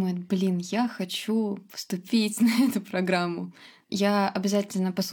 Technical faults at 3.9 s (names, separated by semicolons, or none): none